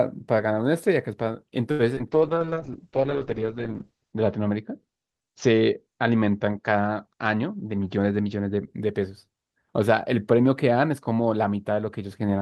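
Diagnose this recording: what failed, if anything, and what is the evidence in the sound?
At 1.71 s a short stall from a late packet sits in the network and jitter-buffer stage. The jitter buffer ran dry, so the receiver stretched the last sound for about 80 ms until the late packet turned up, then resumed at the same point. Nothing is lost, but the sound holds too long and playout delay grows by 80 ms. On a spectrogram it shows as smeared, repeating harmonics through 1.81 s. The waveform shows a looped, slightly buzzy or dipping stretch.

Two short concealed packet losses follow back to back, at 1.95–1.99 s and 1.99–2.01 s, each taking out 20 ms at the network stage. The decoder covered the gaps by extrapolating from the preceding audio, continuing its pitch where voiced and shaped noise otherwise, then crossfading back to real audio. It is heard as a quick smear or wobble. A spectrogram shows a brief blurred patch with flattened detail. 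In the waveform the cycles look too regular before rejoining.

From 2.12 s to 8.73 s a call bitrate drop hits the codec stage. The bandwidth estimate fell, and Opus was pushed from 32 kbps down to 7 kbps, staying at the bottom for 1.99 s. Coding becomes coarse and the audio sounds rough, watery and muffled. Coded bandwidth narrows from 20 kHz to 8 kHz. On a spectrogram the upper band goes abruptly empty above 8 kHz, with grainy, blotchy texture below, until it recovers.

Between 7.56 s and 8.19 s there is a jitter buffer speed-up in call processing. The buffer was holding more audio than its target, so the receiver repeatedly removed short pitch-period pieces, about a tenth of a second in total, playing at roughly 112% speed with pitch unchanged. It sounds hurried. A waveform shows syllables visibly compressed in time. On a spectrogram, harmonic spacing stays constant while events crowd closer together.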